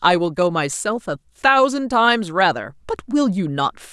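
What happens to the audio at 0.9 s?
Nothing goes wrong at 0.9 s; the speech continues intact through that moment.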